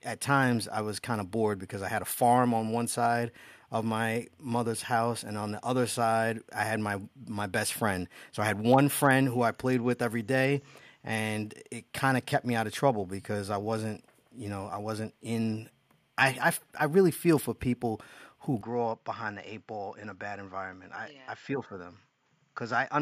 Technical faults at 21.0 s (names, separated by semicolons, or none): input switched to a poorer device